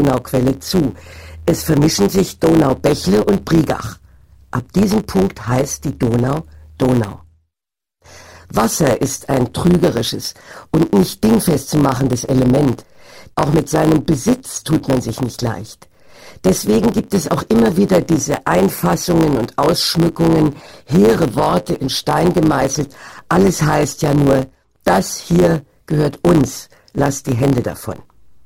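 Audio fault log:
Throughout, block size mismatch (truncated): a steady 100 Hz buzz, and the audio runs 1.07 times fast with its timbre unchanged, which fits 512-sample blocks losing their tail ends.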